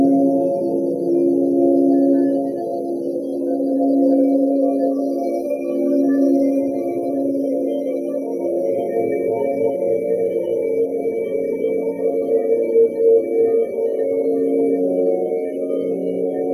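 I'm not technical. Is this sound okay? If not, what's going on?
Yes, I listened closely and nothing in this sound stood out as a problem.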